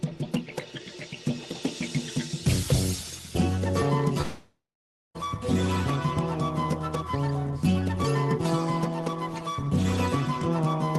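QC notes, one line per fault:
4.21–5.17 s, long network dropout: the sound smears into a fading buzz, then about half a second of silence, and resumes with the missing stretch skipped, likely from lost packets. Unlike a brief packet-loss click, this is a long, decaying tail, band-limited to 12 kHz like the rest of the call audio.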